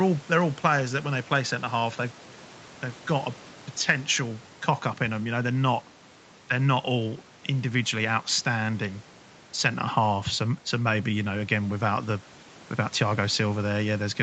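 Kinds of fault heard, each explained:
No audible faults; the speech carries ordinary call-path band limiting.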